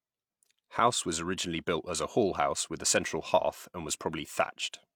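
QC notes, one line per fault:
Nothing to flag here: the speech comes through with no faults to report.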